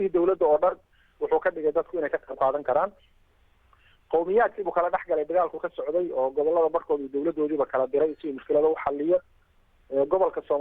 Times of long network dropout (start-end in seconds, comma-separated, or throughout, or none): none